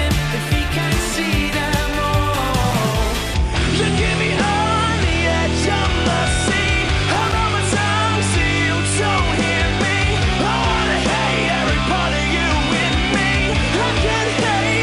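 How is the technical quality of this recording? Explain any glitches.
The recording has two bursts of loose connector crackle, from 2.70 to 2.80 s and from 7.15 to 7.39 s. A worn or dirty contact somewhere in the signal path lost and regained connection many times in quick succession as it shifted. That rapid making and breaking chopped the audio into fragments. The result is a short, irregular scratching crackle. The second burst lasts roughly two and a half times as long as the first.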